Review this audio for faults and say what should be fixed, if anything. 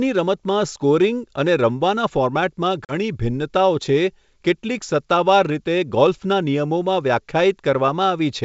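Packet loss on an ADPCM call, from 2.85 to 2.94 s: a few packets, about 40 ms of audio, drop out as a hard-edged silent gap. The decoder's predictor and step size then lose track of the sender's, so the speech comes back with brief distortion before settling. The G.722 wideband coding, which sounds consistent with 64 kbit/s, shows only faint hiss in the upper band. Adding packet loss concealment with decoder state resynchronisation, or a jitter buffer with redundancy, would prevent this.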